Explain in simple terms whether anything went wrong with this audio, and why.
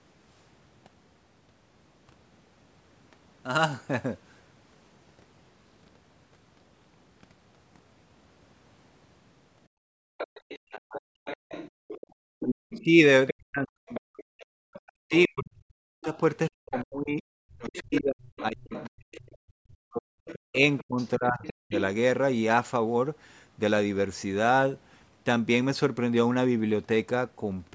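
Background gated by the echo canceller, from 9.68 to 10.18 s and again from 11.71 to 12.40 s: the room sound behind the talker suddenly falls almost to silence for about half a second each time, then comes back. While the call's loudspeaker was playing, the echo canceller turned the microphone down very hard to keep the loudspeaker out, and the background was muted with it until the canceller let go.

Other side's voice leaking through, from 10.18 to 19.17 s and from 20.26 to 21.77 s: a second, much quieter voice can be heard underneath the main talker. This is likely the far-end caller coming out of the talker's own loudspeaker and getting back into the microphone. The echo canceller was supposed to remove that sound but missed part of it, so a faint copy of the other person gets through.

Speech suppressed in double talk, from 10.68 to 11.27 s and from 12.76 to 21.73 s: the main talker's voice drops away sharply, very deeply at its worst. 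Across the longer stretch, about seven seconds of speech are affected. This likely happened because both people spoke at once. The echo canceller couldn't tell the talker apart from the loudspeaker's echo, so it turned everything down, including the person it should have kept.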